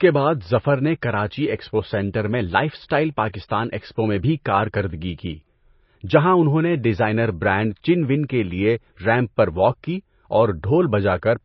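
Throughout the clip, one channel of the original runs a few samples behind the other, roughly 0.07 ms, and summing them to mono produces channel delay (comb filtering). Shared content cancels at evenly spaced frequencies, with the first notch around 7 kHz, which gives the speech a hollow, phasey sound.

Also throughout, the speech has been pushed through what is likely MP3 compression at a bitrate that fits about 24 kbps. Starved of bits, the encoder has cut everything above 6 kHz and dropped weak frequency lines that flicker between frames. The result is heavy damage: a watery, swirly texture with smeared consonant attacks.

At 3.33 s, between "میں لائف اسٹائل" and "ایکسپو میں بھی کارکردگی", a sharp onset falls late in a transform block, causing pre-echo. The quantisation noise meant for the loud attack spreads back over the silence just before it, about 12 ms, so a short hiss leads into a softened attack.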